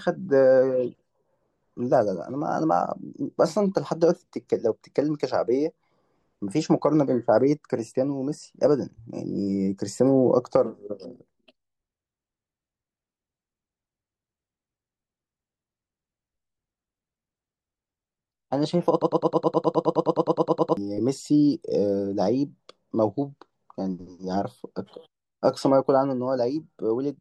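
At 19.02 s the speech hits a broken-record loop: a 104 ms fragment repeats 17 times until 20.77 s, likely a stalled player resending its last buffer.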